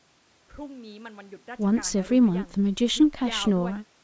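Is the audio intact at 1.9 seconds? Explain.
Yes, the speech at 1.9 seconds is intact, with no fault at that moment.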